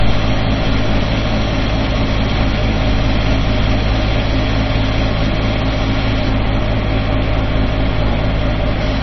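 From start to finish the sound is dull and watery, with a swirling, unstable texture and metallic chirps on bright, noisy parts, and transients smeared rather than crisp. Nothing is heard above about 5.9 kHz. This is likely heavy MP3 compression at a very low bitrate, around 24 kbps. Starved of bits, the encoder cuts all treble at that fixed frequency and drops weaker frequency lines, which flicker on and off between frames.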